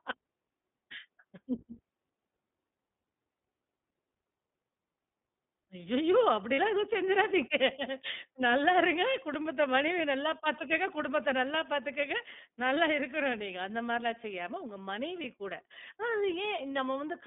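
The speech runs through the iLBC codec from start to finish. Its band is narrow, from about 200 Hz up to about 3.6 kHz, so the top end is missing. Each short frame is coded on its own. The voice stays clear but sounds plainly rough and slightly synthetic. That grain is the codec working at a low bitrate. The quality fits the 15.2 kbps mode with 20 ms frames.

Lost iLBC frames come first at 6.54 to 6.59 s. The gap is about 40 ms, which fits two lost frames. The decoder filled it by repeating the last pitch cycle with some noise. It comes across as a brief held, buzzy vowel. At 15.22 to 15.26 s a shorter loss of about 20 ms does the same thing. In both cases the voice recovers almost immediately, because each frame decodes independently.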